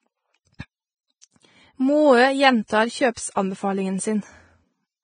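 Heavy Vorbis compression likely squeezed this speech recording to a very low bitrate, which fits about 18 kbps. Nothing remains above 9.7 kHz, and the coarsely quantised treble turns to hiss and grain, roughening tones and blurring attacks throughout.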